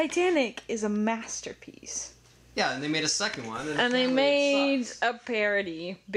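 Nothing stood out on listening to the audio.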